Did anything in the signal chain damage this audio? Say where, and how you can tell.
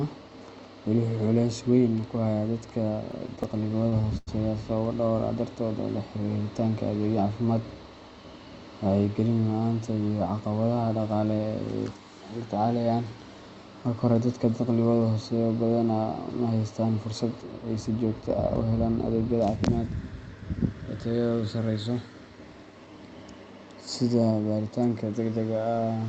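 Yes. From 3.11 to 4.29 s the speech stutters: repeated stalls at the network and jitter buffer stage. Late packets emptied the buffer twelve times, and the receiver stretched the last sound to bridge each gap, the longest 95 ms, so the passage drags without losing content.

At 19.25 to 19.56 s a jitter buffer speed-up hurries the speech to about 112% at unchanged pitch. The buffer had overfilled, so the receiver trimmed short pitch-period pieces, roughly 50 ms in total, to pull the delay back down.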